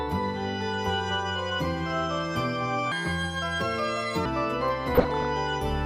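From 2.92 to 4.26 s the sound turns hurried and high, running 1.37 times fast and about five semitones up: a section at the wrong speed, likely from playback against the wrong clock. Between 4.95 and 5.25 s a bubbling, squelchy chirping appears: DAB burbling, where weak reception lets a small fraction of bit errors corrupt sub-band levels frame by frame.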